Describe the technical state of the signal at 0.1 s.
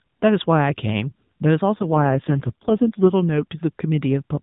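At 0.1 s the signal is intact, with no fault present beyond the narrowband band-limiting of the AMR narrowband mobile codec it passes through.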